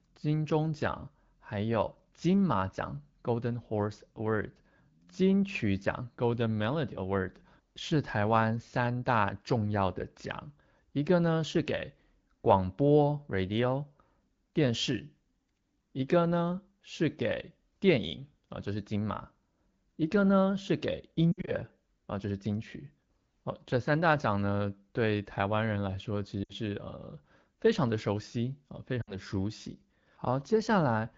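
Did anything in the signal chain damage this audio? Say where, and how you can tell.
Yes. The damage is lost AMR speech frames, introduced on the radio link before the decoder. At 21.32 to 21.52 s, 26.44 to 26.54 s and 29.01 to 29.16 s the speech briefly smears and sags, and after each one it returns weak and rough. The first event is scattered over about 160 ms, with a longest run of 60 ms. The others sound like about 60 ms each, which fits three 20 ms frames. A plain dropout would cut cleanly to silence or click. Here the wideband decoder repeats its last good pitch and vocal-tract settings at falling gain, so the sound stretches and fades instead of breaking.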